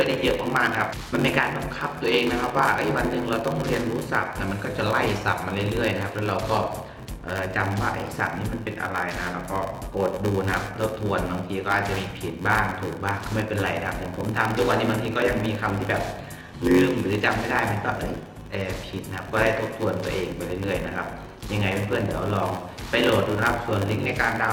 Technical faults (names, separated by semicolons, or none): block size mismatch (padded)